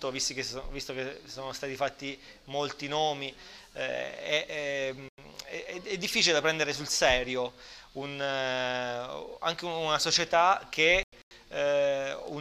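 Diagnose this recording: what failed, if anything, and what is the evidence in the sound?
Two abrupt dropouts to dead silence, from 5.09 to 5.27 s (about 0.19 s) and from 11.03 to 11.31 s (about 0.28 s). The sound cuts off instantly and resumes without any shift in timing. This is a corrupt frame muted at the codec decode stage. Bit errors in the compressed stream made the decoder reject whole frames, and the player substituted silence. The gap lengths point to roughly two and four consecutive frames lost.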